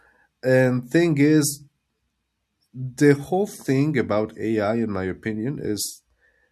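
A short speech recording with no technical faults to report anywhere in the signal.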